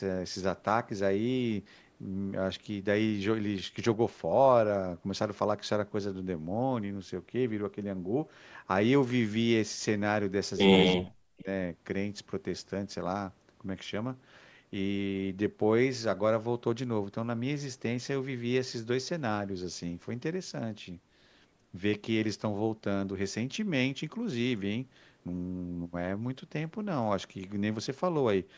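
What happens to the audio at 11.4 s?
The echo canceller likely could not tell the talker apart from loudspeaker echo while both sides spoke at once, so it turned the microphone path down. From 11.36 to 11.49 s the speech is suppressed in double talk, dipping by roughly 20 dB at its deepest.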